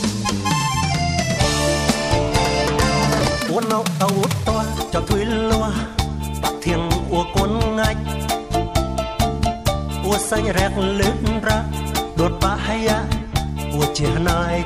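A time-stretched section runs from 3.14 to 5.18 s, where the pace abruptly jumps to about 1.5 times normal speed while the pitch stays exactly where it was. The sound turns rushed, then drops back to its normal pace at 5.18 s. The likely cause is software squeezing this stretch to fit a shorter length, keeping pitch steady by cutting out short slices and butting the remainder together.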